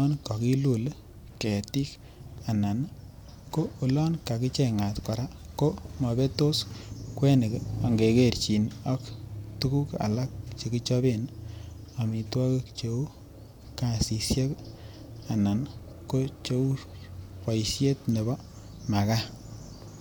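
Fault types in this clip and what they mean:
No technical faults are audible.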